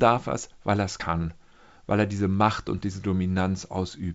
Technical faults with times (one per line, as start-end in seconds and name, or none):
none